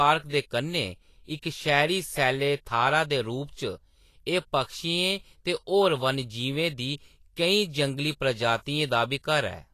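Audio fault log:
Throughout: Vorbis compression, speech band-limited to 14.2 kHz with grainy, hissy treble, likely from coarse quantisation at a low bitrate, around 36 kbps.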